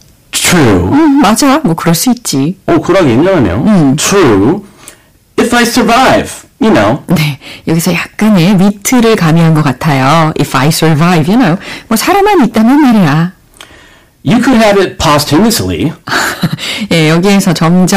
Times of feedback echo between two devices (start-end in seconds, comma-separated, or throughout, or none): none